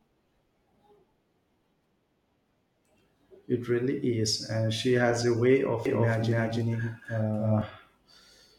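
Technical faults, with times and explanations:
5.86–7.62 s, doubled audio track: right after "she has a way", a second, equally loud copy of the speech trails roughly 300 ms behind, dry and full-band, cutting in and out abruptly, likely from a slower second capture path or misaligned edit.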